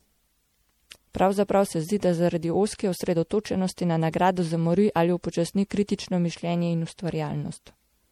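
Generation loss runs through the whole of this speech clip: the sound is swirly, smeared and hollow, with blurred consonant onsets. This is likely the result of repeated MP3 encoding, roughly three passes at a rate that fits 64 kbit/s, each requantising on a shifted frame grid so noise and spectral gaps accumulate.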